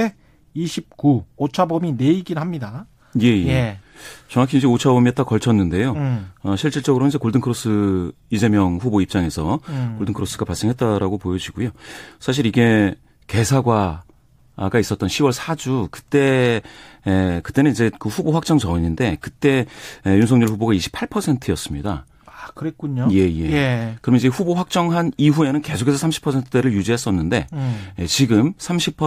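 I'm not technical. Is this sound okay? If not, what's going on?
Yes, it sounds fine.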